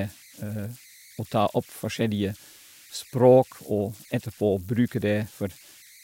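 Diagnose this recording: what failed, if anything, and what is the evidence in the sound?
The converter failed: converter idle tones run through the whole speech clip, a tone around 2 kHz sitting about 27 dB below the signal. An undithered delta-sigma modulator locks into repeating bit patterns on low-level input, so the tone shows in pauses. Unlike mains hum, its pitch follows the input offset, not the supply frequency.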